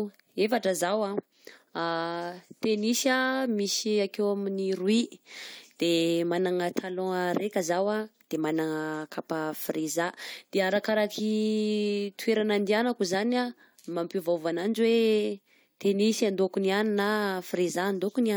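Nothing stood out on listening to this speech recording.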